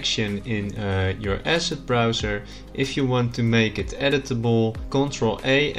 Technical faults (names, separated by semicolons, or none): none